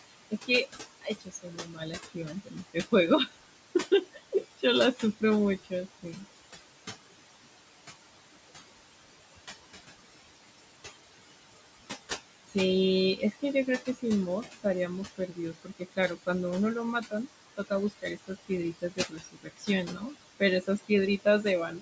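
Throughout, the background sinks between phrases and swells back under the speech, leaving a residue. These are noise suppressor artifacts: the suppressor pulls the room noise, which sits about 11 dB below the speech, down by about 21 dB frame by frame.

From 0.08 to 6.25 s, 12.47 to 12.56 s, 13.16 to 16.28 s and 17.01 s to the end, soft consonants and word endings sound swallowed, dropping by about 20 to 21 dB. This is speech cut by the noise suppressor, which mistook those quiet parts for noise. The effect is heaviest in the first stretch, with around two seconds affected.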